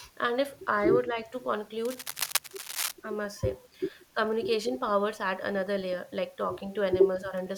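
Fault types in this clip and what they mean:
Cable scratch noise: likely a worn cable or connector shifting, its contact resistance jumping; dense scratchy bursts sit over the speech, loud, only about 5 dB under it.
Speech suppressed in double talk: likely an echo canceller unable to separate its own talker from loudspeaker echo during overlapping talk; the speech briefly dips about 10 dB, in two short moments.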